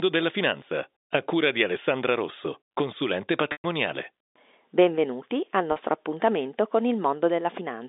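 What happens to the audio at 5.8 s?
Packet loss with pitch repetition occurs just before that point, from 5.72 to 5.76 s, leaving a 40 ms gap. A stretch of the audio stream never arrived, about what two lost packets would carry. The receiver filled the hole by repeating the last pitch period it had. Because the loss is brief, it comes across as a slightly held, buzzy sound rather than a drop to silence, and the speech resumes by 5.8 s within the narrow telephone band.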